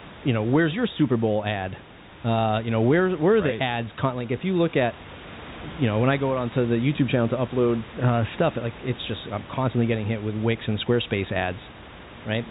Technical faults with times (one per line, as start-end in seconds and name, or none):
none